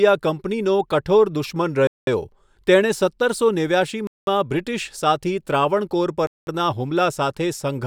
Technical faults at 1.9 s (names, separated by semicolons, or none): gap between chunks